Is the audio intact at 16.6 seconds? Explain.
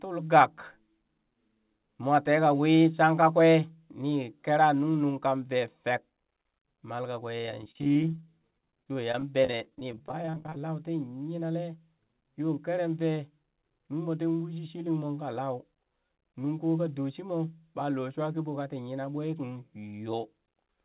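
Yes, the speech at 16.6 s is intact, with no dropout, glitch or distortion at that moment, only the narrow band of the WebRTC call path, with nothing above 4 kHz, which fits a 64 kbps G.711 mu-law codec.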